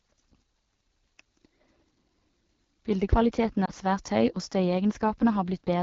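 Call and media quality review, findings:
AMR wideband (HD Voice) codec, whole clip: rough, raspy speech texture consistent with AMR-WB at one of its two lowest rates, likely near 8.85 kbit/s. The band still reaches 7 kHz with a noise-filled top, unlike narrowband AMR's 3.4 kHz ceiling.

Lost AMR speech frames, 3.65 to 3.71 s: brief dip or warble, not a hard gap. The decoder repeated the previous pitch and vocal tract settings at falling gain, which fits a single lost 20 ms frame.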